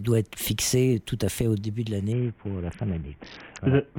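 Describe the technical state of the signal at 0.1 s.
At 0.1 s the signal is intact, with no audible dropout, distortion or other technical fault at that moment.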